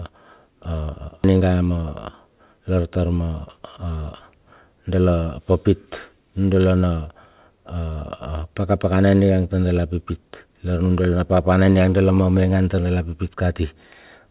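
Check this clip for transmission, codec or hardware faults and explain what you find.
Two faults stand out in this speech clip, which comes through a call path with nothing above 4 kHz, consistent with G.711 A-law.

Skip ahead at 1.24 to 1.26 s: roughly 0.7 s of audio was dropped while later audio waited, so playback jumps forward with no gap, joining the two sides almost directly.

Jitter buffer speed-up from 1.33 to 3.36 s: the overfilled buffer trimmed repeated pitch-period pieces, about 0.3 s in total, so the speech runs at 113% speed with unchanged pitch and sounds hurried.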